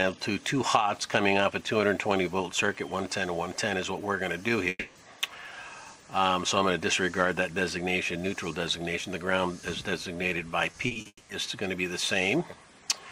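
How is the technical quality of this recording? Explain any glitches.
The recording has three audible glitches near the middle and the end, all from interrupted delivery.

From 4.69 to 4.97 s there is a long network dropout, likely a stall in arriving data. The last sound is stretched into a fading buzz for about 0.26 s, then about 20 ms of silence before the audio resumes with that portion missing.

From 10.71 to 11.07 s, repeated packet loss gives a choppy, robotic texture. Four short gaps, the longest 40 ms, are each patched by extending the preceding sound, so about a third of that stretch is synthetic fill.

That leads straight into a second long network dropout from 11.07 to 11.31 s, again likely a delivery stall. About 0.22 s is bridged with decaying fill, followed by roughly 50 ms of silence before the audio returns without the lost section.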